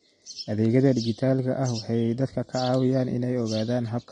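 From start to finish the speech sounds dull and smeared, with nothing above about 9.7 kHz, and sibilants carry a watery, fizzy warble. That combination points to AAC compression, likely AAC-LC at a low bitrate near 32 kbps, where the encoder lowers its cut-off and starves the upper bands of bits. A simple low-pass filter would also remove the top, but it would leave the remaining band clean rather than swirling and textured.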